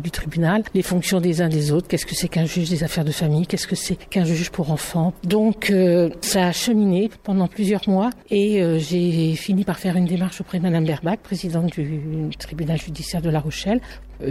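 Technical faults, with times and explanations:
12.32 to 14.31 s, mains hum: in the final two seconds a steady low drone at 50 Hz comes in and stays until the end, sitting at roughly 20 dB below the signal. The tone comes from the power line leaking into the signal path, through a ground loop between connected equipment or magnetic pickup from a nearby transformer, which imposes the 50 Hz supply frequency on the audio.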